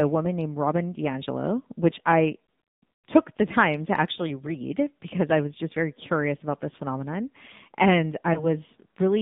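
The AMR narrowband mobile codec shapes this speech clip throughout, and its damage is plainly audible. The line is confined to about 150 Hz to 3.7 kHz with nothing above, and the speech has the buzzy, synthetic edge of a vocal-tract model fed with very few excitation pulses per subframe. That texture fits AMR-NB running near its 7.4 kbps mode, low enough that the coarse pulse coding is easy to hear. A lost AMR speech frame follows from 8.34 to 8.51 s. The decoder fills the gap by carrying the previous pitch and vocal-tract settings forward at reduced gain, so the sound briefly dips and wavers before the speech recovers somewhat rough. The shortness of the disturbance points to a single dropped 20 ms frame rather than a run.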